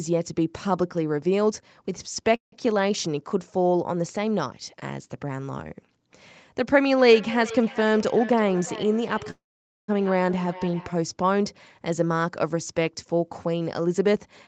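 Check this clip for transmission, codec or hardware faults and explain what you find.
Yes, there are three kinds of fault: two call audio freezes, a feedback echo between two devices, and two jitter buffer speed-ups. The audio has nothing above 8 kHz, which fits the Opus call path.

Call audio freeze, 2.35 to 2.54 s and 9.30 to 9.90 s: the sound stops, its last moment trails away, and then it resumes exactly where it left off. The first gap is 0.17 s with 0.13 s of silence. The second is 0.58 s with 0.49 s of silence. Nothing is lost. The likely cause is delayed packets draining the jitter buffer, leaving the receiver to fill the wait.

Feedback echo between two devices, 6.85 to 11.04 s: the speech returns about every 0.4 s, thinner and ringing, at its loudest about 15 dB below the direct speech. A second device in the room plays the call and the first device's microphone sends it back. 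Each echo canceller removes only its own playback.

Jitter buffer speed-up, 8.02 to 9.28 s at 109% and 13.54 to 14.47 s at 112%: the speech sounds hurried while its pitch stays the same. About 0.1 s is trimmed in each stretch. The receiver cuts many pitch-period-sized slices to shrink an overfull buffer after packets arrive in a bunch.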